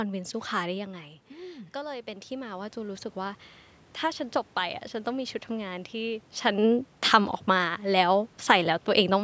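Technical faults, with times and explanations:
1.72–3.45 s, automatic gain rising: after the talker moves back from the microphone around 1 s, the speech arrives about 10 dB quieter, so the call's gain control treats the input as too quiet and lifts its gain by about 6 dB over roughly 1.7 seconds. The room noise swells along with the speech. That sets this slow gain ramp apart from a talker moving closer, where the background would stay level.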